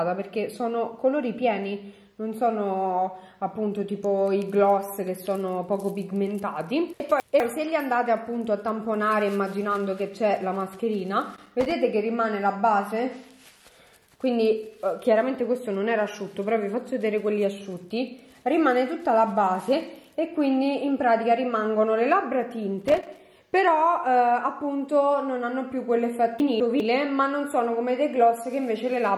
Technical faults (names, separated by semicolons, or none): chunks out of order; loose connector crackle